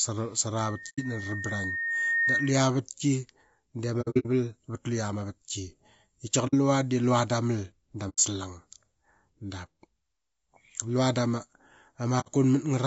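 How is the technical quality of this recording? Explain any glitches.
Quality is poor: the speech carries a constant codec roughness, there's a feedback squeal near the start, and there are five short dropouts scattered through the clip.

The whole clip sounds rough and grainy, with noise filling the gaps between harmonics and a thin, synthetic top end. That's the signature of low-delay AAC compression, likely AAC-ELD at a bitrate around 32 kbps. At that bitrate its coarse quantization lets noise creep in between the pitch harmonics.

From 0.61 to 2.69 s there's a loudspeaker feedback squeal, a single tone at 1.8 kHz that swells over a second and a half to about 5 dB above the speech. The microphone picks up its own loudspeaker, and at that frequency the loop gain tops one, so the tone keeps building.

AAC frame loss with muting shows up at 0.89 to 1.00 s, 4.01 to 4.26 s, 6.47 to 6.54 s, 8.09 to 8.19 s and 12.20 to 12.28 s. 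The decoder zeroes the missing frames, and the overlapping windows fade the audio out and back in, leaving soft-edged holes. The one at 4.01 s is several short gaps spread over about 240 ms, with the longest around 70 ms.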